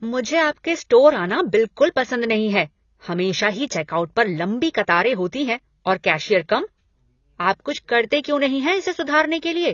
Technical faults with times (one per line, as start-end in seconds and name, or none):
0.00-9.74 AAC compression